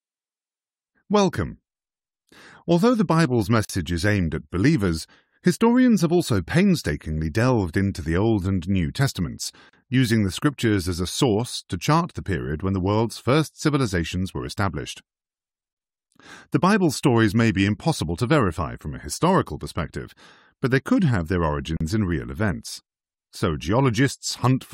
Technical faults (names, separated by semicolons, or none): gap at a join of encoded pieces